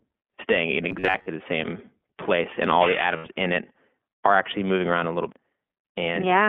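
Speech, band-limited throughout by the iLBC codec: nothing reaches below about 250 Hz or above 3.4 kHz, and the plainly audible rough, slightly synthetic texture fits iLBC's 20 ms frame mode at 15.2 kbps, where each frame's excitation is coded independently. From 0.89 to 1.28 s, between "staying in" and "the same place and", the sound turns into a rigid metallic buzz at 93.8 Hz that still loosely tracks the speech. This robotic sound is likely from repeated short buffers, each about 10.7 ms long, with roughly half the audio in that span being repeats. Unlike a concealed dropout, it is a steady imposed pitch over continuing speech. From 3.16 to 3.27 s, after "place and all the" and before "in it are actually", an 80 ms stretch becomes a held, faintly buzzy vowel, which points to four lost iLBC frames filled in by pitch-cycle repetition. The voice is right again almost at once afterwards, with no robotic tone carrying on. 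At 5.32 s, just after "moving around a little", a CD skip gives a tick and a very brief mute, and the audio then jumps to a different point. Nothing is filled in here: the speech cuts away abruptly.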